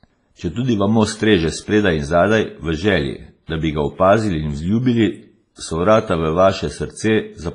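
Across the whole speech clip the sound rings and turns washy, with a hiss that breathes with the signal and nothing above 10.5 kHz. The likely cause is heavy WMA compression at a low bitrate, fitting roughly 24 kbps, where long transform blocks smear quantisation noise and weak components vanish.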